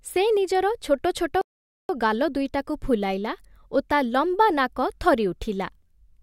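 At 1.41 s the speech hits a rebuffering stall: the player runs dry, goes silent until 1.89 s, then picks up exactly where it stopped, adding about 0.48 s.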